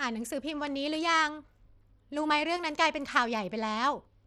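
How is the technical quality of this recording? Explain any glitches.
Quality is clearly degraded throughout. From start to finish the speech sounds gritty, with treble that thins and flickers. The likely cause is Bluetooth SBC compression at a bitrate around 96 kbps, which starves the upper sub-bands of bits and coarsely quantises the rest.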